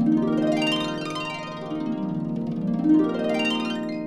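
No technical faults can be heard anywhere in this audio. Nothing in the sound points to a failure in how it was captured, processed or carried.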